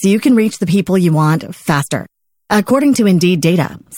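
Compressed frames skipped at about 2.70 s: the audio jumps forward by roughly 20 ms, as whole coded frames go missing or are rejected as damaged by the decoder.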